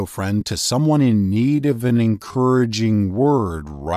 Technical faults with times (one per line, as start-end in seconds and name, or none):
0.41 lost LE Audio frames
1.00-3.96 time-stretched section